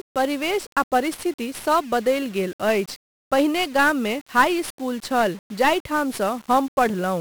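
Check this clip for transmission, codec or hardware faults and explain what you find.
The speech carries one codec fault for its whole length: heavy 1-bit DFPWM compression. Each sample is reduced to a single up-or-down bit nudging an adaptive level, so strong broadband quantisation noise rides on everything, leaving the speech fuzzy and crackly with its treble buried under hiss, a damage level that fits roughly a 48 kbps stream. Unlike a low-bitrate transform codec, there is no swirly, watery smearing or missing high band, only constant gritty noise tracking the signal.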